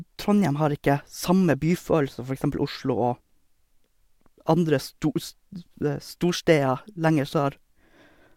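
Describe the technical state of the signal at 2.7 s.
At 2.7 s the signal is intact, with no audible fault at that moment.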